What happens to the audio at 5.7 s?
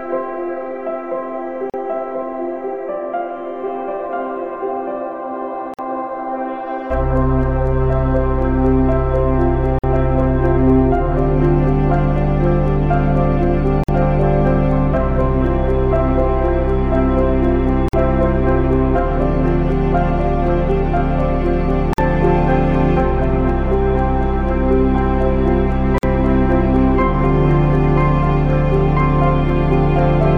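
The sound cuts out for 49 ms, from 5.74 to 5.79 s, and resumes where it stopped. This is a gap at a join of encoded pieces, left by untrimmed encoder delay and padding.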